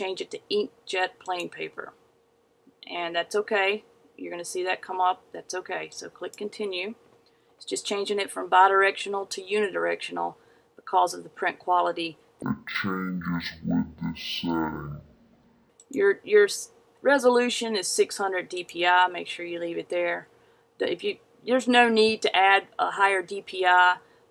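Stereo read as mono, from 12.42 to 15.70 s: the left and right samples, which alternate in the stream, are taken in turn as one continuous channel, so each stereo frame is played as two consecutive samples. The sound in this span therefore runs at half speed and drops a full octave, 12 semitones, giving a slowed, deepened stretch. A fainter mirrored copy of the sound sits in the upper half of the spectrum.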